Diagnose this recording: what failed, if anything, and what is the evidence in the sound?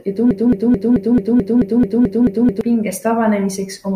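The playback or streaming buffer likely stalled and kept resending its last fragment, producing a broken-record loop in this speech from 0.31 s to 2.61 s. A 0.22 s slice repeats exactly, back to back, eleven times, and the speech that belonged in that span is lost.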